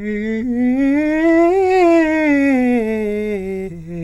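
Nothing to flag in this music clip: no technical faults are audible at any point.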